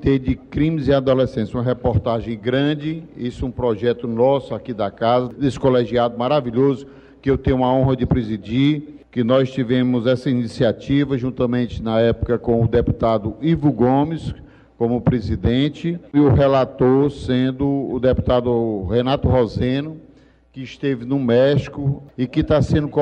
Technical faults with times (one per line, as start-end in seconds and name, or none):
none